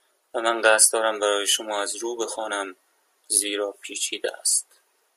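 Nothing stood out on listening to this speech recording.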